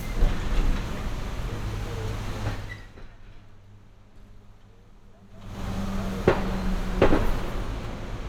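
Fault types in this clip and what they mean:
zipper noise: The level moves in discrete jumps instead of a continuous ramp, and each jump leaves a tiny click. A drop of about 20 dB from 2.48 to 3.07 s is made in 2 dB steps, and a rise of about 20 dB from 5.29 to 5.63 s is made in 3 dB steps. Both run at around twenty steps a second, laying a fast, even ticking over the sound. Scattered clicks from dropouts fall at random times, but these ticks are evenly spaced and occur only while the level is changing.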